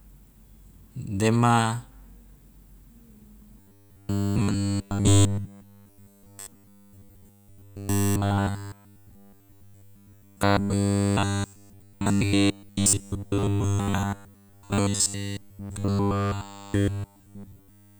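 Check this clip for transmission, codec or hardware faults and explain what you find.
One fault is present: robotic sound from repeated short buffers, running from 3.6 s to the end of the speech. From that point essentially all of the audio is a rigid, metallic buzz at 100 Hz that only loosely follows the speech. The likely cause is fresh audio arriving too seldom, so the playback side keeps looping the last 10 ms block while the real material is skipped. The fixed 100 Hz tone, set by that loop length, separates it from pitch shifting or simple dropouts.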